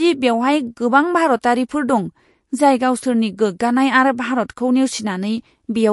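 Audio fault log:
Throughout, MP3 compression: the speech sounds watery, with no content above 11.3 kHz, likely from a low-bitrate encoder, perhaps around 48 kbps, zeroing weak frequency lines.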